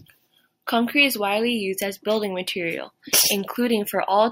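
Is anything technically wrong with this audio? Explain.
No, nothing technically wrong can be heard in this speech recording. There is no fault to point to at any moment in it.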